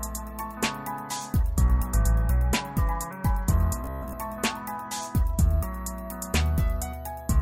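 From 3.85 to 4.15 s the audio collapses into robotic sound from repeated short buffers, a rigid metallic buzz near 67 Hz. It is likely caused by a roughly 15 ms segment being looped to cover late input, with most of that span repeated. A spectrogram shows evenly spaced harmonic lines, and the waveform shows identical repeating cycles.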